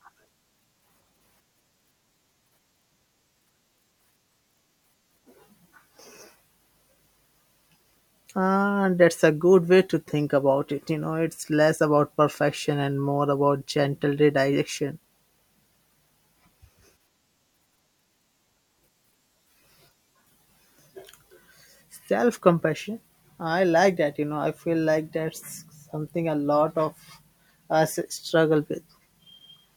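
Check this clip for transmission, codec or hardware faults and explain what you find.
Nothing here points to a transmission, codec or hardware problem; the speech comes through without any audible fault.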